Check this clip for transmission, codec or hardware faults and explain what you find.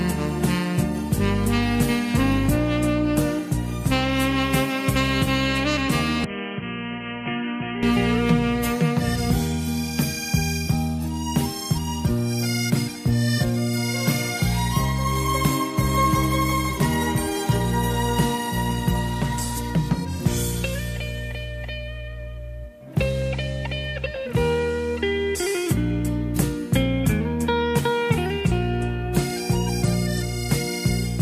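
One fault is present. From 6.24 to 7.83 s, the input likely switched to a poorer device: the band stops at 3.2 kHz, the level drops roughly 10 dB, and a new noise floor appears, with no gap.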